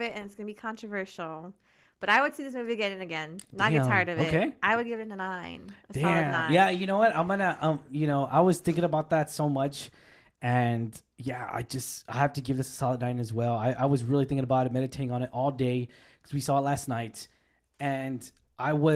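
There are no technical faults to describe in this speech.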